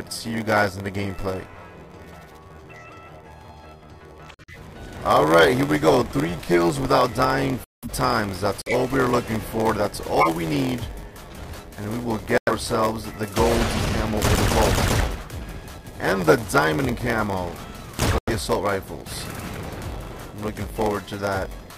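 Throughout the clip, a block size mismatch (padded) is present. The stage reading the audio takes blocks that fit a 512-sample size, while the stage feeding it supplies fewer samples per block, which points to roughly 480-sample writes. The shortfall in each block is filled with zeros. The result is a steady 86.1 Hz buzz from those repeating gaps, and the audio runs slow at 0.938 times normal speed with its timbre unchanged.

At 4.31 s the first corrupt frame muted event cuts in. Damaged compressed frames were rejected by the decoder, and the player substituted silence. The hole starts abruptly and lasts until 4.56 s, a span that suggests about five frames. Timing is preserved, so the audio resumes where it should. The same kind of dropout recurs from 7.60 to 7.90 s, the longest at about seven frames' length, then from 8.62 to 8.74 s.

At 10.20 s there is a corrupt frame decoded. Here the damaged frame was accepted and played, so misread gains and codes put energy in the wrong frequency bands. 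It is heard as a chirp, squeak, blip or burst of noise, peaking at about -5 dBFS, and it ends at 10.28 s, roughly one frame long.

Two more muted-frame holes follow, with the same abrupt silence, each about two frames long. The first runs from 12.38 to 12.52 s and the second from 18.18 to 18.31 s.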